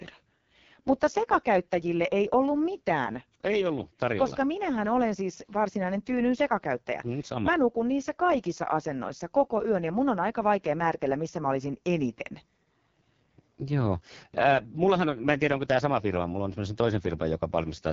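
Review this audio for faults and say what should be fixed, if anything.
The speech was passed through the AMR wideband (HD Voice) codec at its lowest rate, and the roughness points to about 6.6 kbit/s. At that rate the pulse-driven vocal tract model gets too few bits to shape the excitation cleanly, so the speech sounds harsh and raspy for the whole clip. Nothing is present above 6.8 kHz, and the top band is filled with synthetic noise rather than real detail. To prevent this, encode at 12.65 kbit/s or higher, or avoid AMR-WB entirely for this material.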